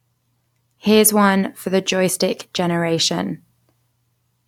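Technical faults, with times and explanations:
No technical faults are heard anywhere in the speech, so there are no times or explanations to give.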